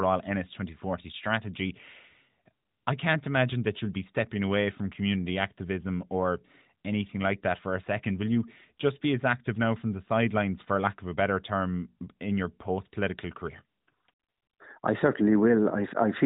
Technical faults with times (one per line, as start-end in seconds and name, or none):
none